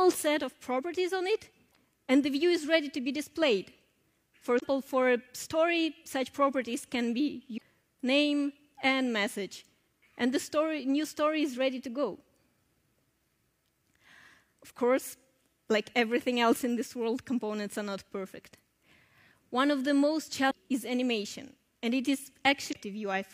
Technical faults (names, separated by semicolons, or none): damaged data in a compressed stream